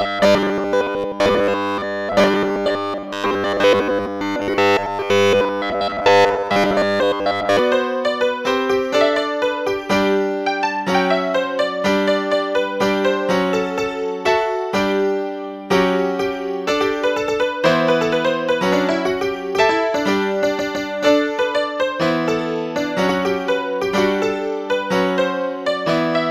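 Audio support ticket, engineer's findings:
Robotic sound from repeated short buffers, 0.01 to 7.59 s. Rigid metallic buzz at 100 Hz, so a repeat every 10 ms. Likely the playback buffer underrunning and looping its last chunk, with most of the real audio skipped in that stretch.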